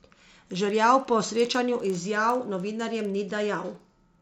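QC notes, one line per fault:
throughout: resampler restarted on every block. The 16 kHz to 48 kHz conversion was run on each 50 ms chunk in isolation, so at every chunk boundary the filter had no real neighbouring samples to work from and left a small error. Those errors land 20 times a second, giving a rough tick-train, almost a low buzz, riding on the speech and dropping away in the gaps where there's no signal.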